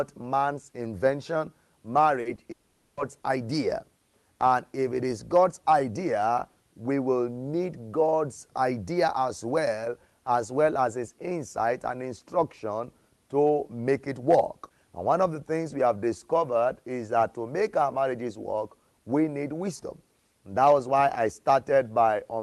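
Short concealed packet loss hits at 2.21 to 2.27 s, 2.35 to 2.39 s and 2.43 to 2.47 s. The gaps are 40 ms, then 20 ms, then 20 ms. Each hole was filled by continuing the last bit of sound before the real audio blended back in. You hear quick smears or small wobbles in close succession, and brief detail in the sound can vanish.

From 2.51 to 2.99 s the sound turns into a held, fading buzz or hiss lasting about half a second. The likely cause is a long network dropout: nearly 0.46 s of audio never arrived, and the receiver kept extending what it had. There is no stretch of true silence. The audio resumes afterwards with that portion gone. The call path itself cuts off above 12 kHz, which fits Opus at around 32 kbps.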